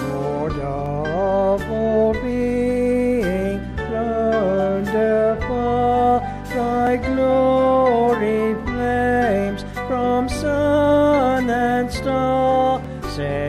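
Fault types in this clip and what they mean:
Overlap between stream segments: tiny skips at 0.86, 6.87 and 12.85 s, where 9 to 19 milliseconds of sound vanish and the waveform jumps. The six-second spacing matches segment boundaries whose time stamps overlap, so the player trims audio that was never actually duplicated.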